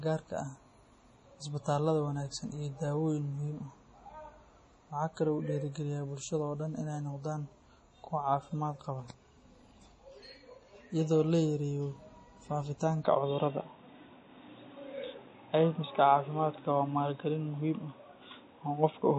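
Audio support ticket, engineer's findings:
Throughout: watery, swirly texture, smeared consonant attacks, hard treble ceiling at 10.5 kHz. Likely MP3 compression at heavy damage, fits a low bitrate near 32 kbps. Encoder starves bands, weak lines flicker per frame. Distinct from a plain low-pass: the swirl, not just dullness.

13.05 s to end: band abruptly narrows to 3.8 kHz, sound goes boxy, level shifts by around 5 dB, new faint noise floor far below signal. No gap at the switch. Input switched to a poorer device, fits a headset call profile. Unlike codec loss: one step change in tone and noise, not frame-to-frame flicker.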